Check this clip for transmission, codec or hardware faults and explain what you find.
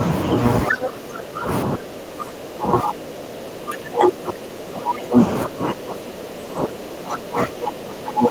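Speech suppressed in double talk affects nearly the whole recording, from 0.67 to 1.49 s, 1.66 to 5.19 s, and 5.45 s to the end. The speech repeatedly sinks, by up to about 20 dB, and sounds pulled back or chopped. The likely cause is an echo canceller that could not separate the near talker from loudspeaker echo during simultaneous talk and turned both down. On a waveform the envelope shrinks through these stretches, and a spectrogram shows matching faded bands.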